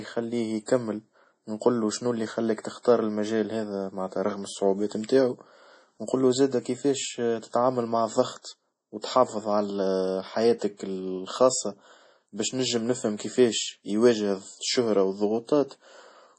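From start to finish the speech carries heavy MP3 compression damage, likely from a starved MP3 encode. Nothing survives above 10.5 kHz, and weak frequency lines blink in and out between frames, so s sounds turn watery and swirly and consonant onsets smear. That fits a bitrate around 32 kbps.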